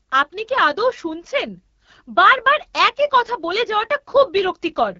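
Speech passed through the AMR wideband (HD Voice) codec at a low rate, likely the 8.85 kbit/s mode, leaves it rough and raspy throughout, with nothing above 7.2 kHz.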